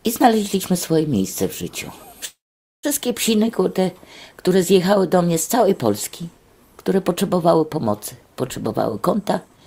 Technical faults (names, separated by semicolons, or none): call audio freeze; jitter buffer speed-up